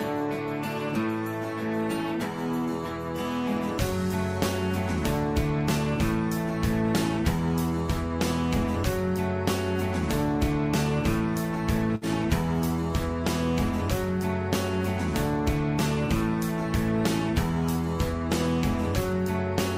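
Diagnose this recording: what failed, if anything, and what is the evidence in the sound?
Network: a burst of packet loss at 11.95 to 12.04 s. The last sound is held and fades for 60 ms, then resumes with 60 ms missing, unlike a silent dropout.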